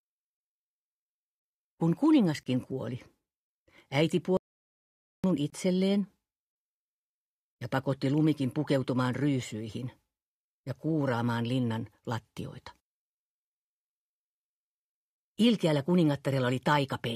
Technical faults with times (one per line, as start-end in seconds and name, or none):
2.43-2.46 gap between stream segments
4.37-5.24 audio dropout to silence
4.48-4.50 gap between stream segments
5.50-5.53 gap between stream segments